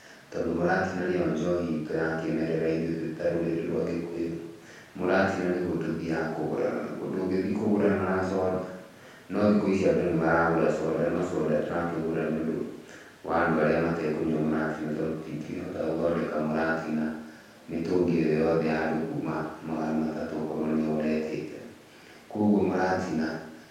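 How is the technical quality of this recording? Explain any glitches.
No audible glitches or faults.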